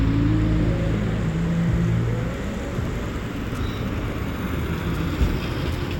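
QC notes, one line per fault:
2.32 s to the end, Wi-Fi interference: a faint, steady tick every 102.4 ms, about ten per second, well below the sound. A nearby Wi-Fi radio's beacon is being rectified by the audio circuit. The spectrogram shows evenly spaced thin vertical broadband lines, and the waveform shows tiny regular spikes.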